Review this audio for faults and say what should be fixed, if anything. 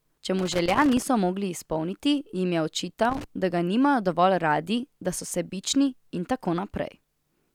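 A worn or dirty contact in the cable path is intermittently opening and closing, producing loose connector crackle: the speech is chopped into irregular fragments. It runs from 0.39 to 1.02 s, just before "mogli izpolniti jim je", and again from 3.05 to 3.24 s, between "mogli izpolniti jim je" and "da ga". Cleaning or replacing the connector and securing the cable against movement should stop it.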